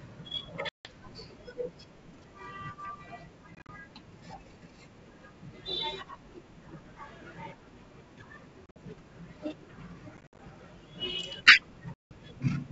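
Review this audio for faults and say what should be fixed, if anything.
Packet loss on an ADPCM call punches silent holes at 0.69–0.96, 3.55–3.70, 8.66–8.77, 10.17–10.40 and 11.94–12.12 s. Each is followed by slightly distorted speech while the decoder's predictor and step size resync. Adding packet loss concealment and a jitter buffer, plus fixing the network loss, should stop it.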